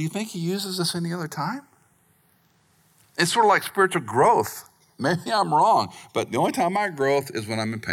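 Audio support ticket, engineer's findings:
Channels drifting apart, throughout the speech. Slow flanging when summed to mono; comb notches sweep gradually through the spectrum. Probable cause: left and right captured on separate devices with unlocked clocks, mismatch around 100 ppm. Inter-channel delay creeps up to roughly half a millisecond by the end. Fix: common clock or resample one channel.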